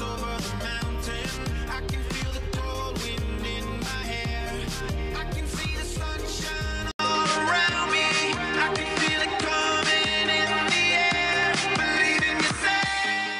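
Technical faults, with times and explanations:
6.91–13.40 s, input switched to a poorer device: after an 80 ms gap the sound loses everything above 10.5 kHz, shifts level somewhat, and gains a new noise floor, likely a changed microphone rather than simple filtering.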